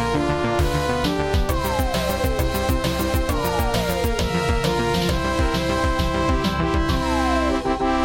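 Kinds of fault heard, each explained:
No kinds of fault are heard in this clip, so there are none to explain.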